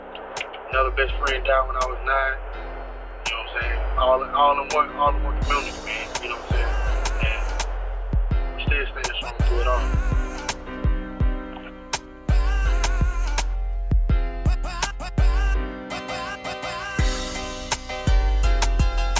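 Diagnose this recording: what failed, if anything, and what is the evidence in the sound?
Nothing failed: no stage in the chain, from wiring through conversion, buffering, transport, storage and playback, leaves any audible defect anywhere in the recording.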